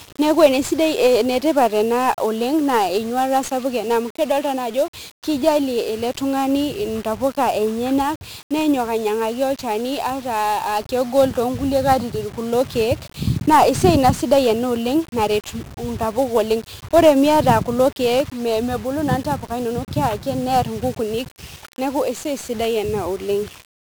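1-bit DFPWM compression runs throughout the speech: one bit per sample nudges an adaptive level up or down, leaving heavy fuzzy crackle and broadband noise, consistent with roughly 48 kbps.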